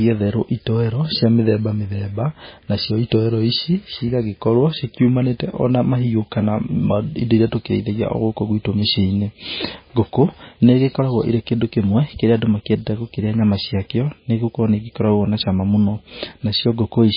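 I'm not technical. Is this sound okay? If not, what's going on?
No. The whole recording carries heavy damage from MP3 compression, most likely saved at a very low quality setting. The treble is cut off completely above 5 kHz, so the speech sounds dull and muffled. With so little data to work with, the encoder throws away quieter detail and lets it flicker in and out moment to moment, which gives the voice a watery, swirling texture and blurs the starts of sounds.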